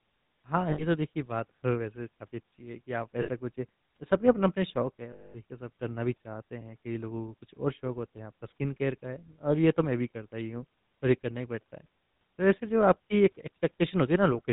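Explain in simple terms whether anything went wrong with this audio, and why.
The whole recording went through the GSM full-rate codec, an old mobile-phone coder. It cuts everything above 4 kHz and leaves speech clearly buzzy and gravelly.

There are also lost GSM frames at 0.70 to 0.84 s, 3.22 to 3.30 s and 5.12 to 5.42 s. Each time, the last good sound is repeated, giving a brief metallic ring.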